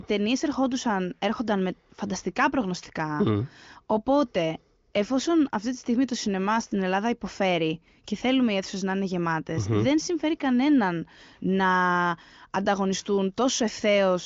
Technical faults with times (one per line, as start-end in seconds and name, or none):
none